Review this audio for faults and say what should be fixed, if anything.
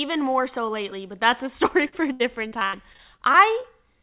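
Repeated packet loss (robotic sound), 1.88 to 3.66 s: ten gaps up to 82 ms are each patched by repeating prior sound, so speech turns choppy with pieces missing rather than dropping out once. To prevent this, stabilise the network link and use a larger jitter buffer or forward error correction.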